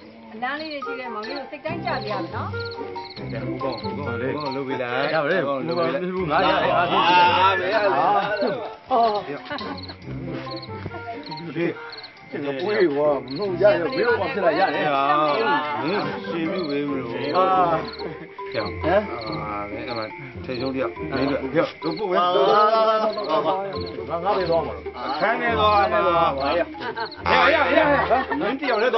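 Nothing stood out as a technical problem on listening.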